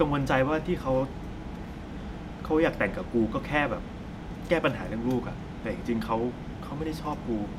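Nothing in the recording stood out as a technical fault on listening.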